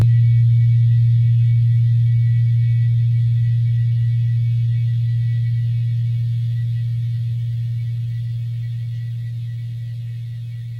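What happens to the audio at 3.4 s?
At 3.4 s the sound is rough and slightly doubled because of channel delay (comb filtering): one channel arrives around 20 ms late, so summing to mono cuts evenly spaced notches from about 30 Hz upward. Unlike a drifting phaser, those notches stay fixed for the whole clip.

Clock drift between sender and receiver is also present. The sender's clock runs roughly 5% fast, so the receiver's buffer keeps overfilling and it must discard material. This is a steady mismatch, not random network loss.

That causes the repeated timing corrections from 0.13 s to 10.74 s, covering 3.4 s. Small pieces are cut out at uneven intervals to keep up with playback at 104% speed. These edits are heard, if at all, as slight hiccups and a wavering pace, not dropouts or repeats.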